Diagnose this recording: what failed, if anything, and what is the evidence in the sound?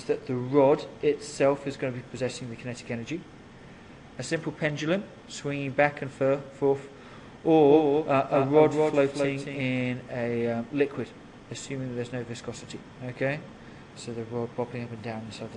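A doubled audio track, likely caused either by a second, slower capture path or by an edit that leaves two copies out of step. From 7.67 to 9.61 s, a full-band copy trails the sound by about a fifth of a second, roughly 5 dB quieter, with no decay or room colour, and it begins and ends abruptly.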